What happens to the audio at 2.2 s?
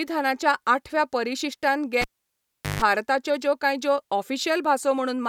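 A live cable was pulled and plugged in between 2.02 and 2.82 s, after "आठव्या परिशिश्टान": a pop, about 0.76 s of near silence, then a 0.15 s burst of 50 Hz mains buzz as the tip touches, and another pop before "ज्यो कांय ज्यो".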